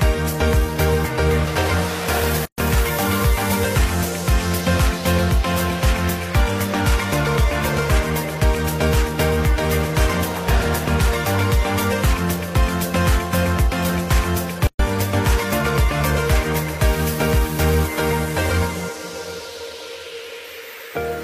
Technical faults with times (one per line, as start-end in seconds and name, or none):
2.45-2.58 gap at a join of encoded pieces
14.67-14.79 gap at a join of encoded pieces